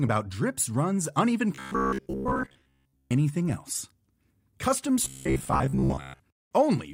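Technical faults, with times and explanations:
1.55 to 3.11 s and 5.04 to 6.21 s: robotic sound from repeated short buffers. The speech turns into a stiff, metallic buzz fixed at 66.8 Hz. That pitch fits a chunk of about 15 ms replayed again and again, likely because new audio arrived too seldom. Most of the real signal is skipped.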